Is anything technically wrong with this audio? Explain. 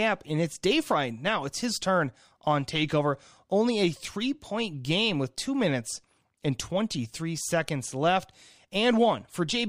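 No, nothing is technically wrong.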